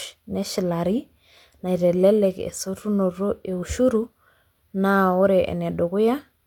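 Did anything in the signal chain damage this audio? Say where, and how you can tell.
Yes, at the codec stage, across the whole speech clip. Nothing sits above 18.5 kHz, and the artefacts of an earlier encode remain throughout. It's likely low-bitrate audio saved at a high bitrate: an earlier low-rate encode re-saved as a large MP3, which can't restore what was removed.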